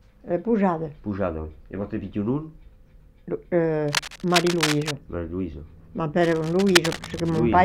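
Two bursts of cable scratch noise sit over the audio, from 3.88 to 4.91 s and from 6.21 to 7.41 s: dense, uneven scratching and rustling only a few dB below the signal. This is likely a worn cable, connector or control being moved, its contact resistance fluctuating rapidly.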